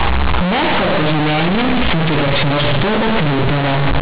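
From the first moment to the end, the speech suffers from companded audio read as linear. The stream was written as mu-law, but its bytes are played as plain linear 8-bit samples without expansion, so every sign change jumps across roughly half the output range. Quiet passages come out as large as loud ones and the waveform is badly bent, giving loud, buzzy distortion with heavy noise in the pauses. The underlying G.711 mu-law coding at 8 kHz is itself intact.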